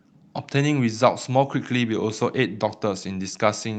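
No technical faults are audible.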